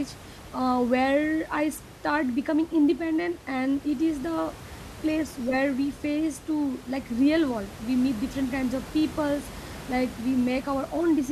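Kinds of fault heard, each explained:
Nothing stood out on listening to this speech recording.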